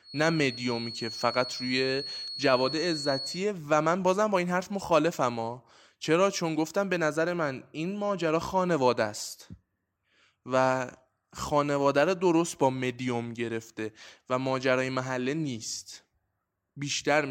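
A loudspeaker-to-microphone loop likely sitting right at the edge of feedback produces a feedback whistle from 0.0 to 3.46 s. The loop gain is high enough to sustain a single tone at 4.3 kHz but not enough for it to build into a howl, so the ring holds steady instead of running away. Against the speech it comes through as a thin, high whistle roughly 10 dB below the voice, slowly swelling and fading in level before it stops.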